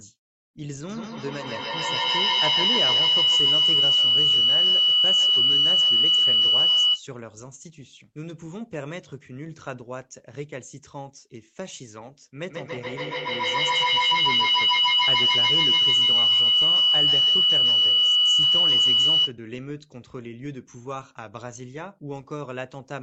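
Feedback howl from 0.89 to 7.09 s and again from 12.5 to 19.4 s: a microphone-to-loudspeaker loop gains level on every pass, so repeats pulsing roughly every 150 ms grow into a tone near 3 kHz, peaking about 13 dB above the speech.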